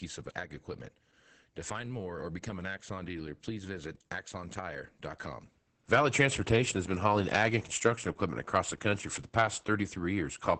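Opus voice compression runs through the whole speech recording. The codec is working in its SILK linear-prediction mode at wideband, so nothing is left above about 8.8 kHz. Sibilants and breath lose their air, and the voice sounds muffled. The excitation is coded coarsely, which leaves the speech hoarse and somewhat robotic. The damage is heavy and consistent, which fits a bitrate of around 10 kbps with 20 ms frames.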